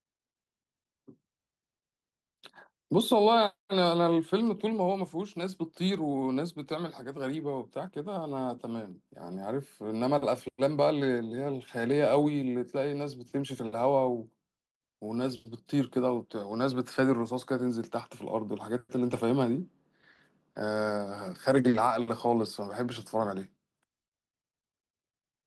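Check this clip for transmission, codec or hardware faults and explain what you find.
The speech shows transmission faults of two kinds, all network packet loss.

Lost packet rebuilt from error correction at 19.07–19.17 s and 21.73–21.79 s: the decoder played low-bitrate backup copies carried in following packets, roughly 60 ms, then 40 ms, so there's no gap, just briefly rougher, noisier sound.

Short concealed packet loss at 21.69–21.75 s: about 40 ms never arrived, and the receiver extrapolated from preceding audio, giving a brief smear just before the second rebuilt stretch.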